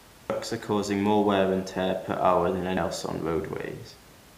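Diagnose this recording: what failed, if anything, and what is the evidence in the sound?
Damaged data in a compressed stream at about 0.30 s is a codec-stage failure, heard as a single brief disturbance in the speech. Part of the compressed data at that point was corrupt, so the decoder could not read the affected frame, lost sync, and resumed only at the next valid frame header. The room noise, about 25 dB below the speech, belongs to the recording itself.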